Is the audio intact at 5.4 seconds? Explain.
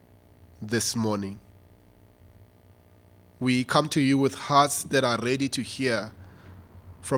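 Yes, at 5.4 seconds the speech plays through intact, with no dropout, click, distortion or other fault audible at that point.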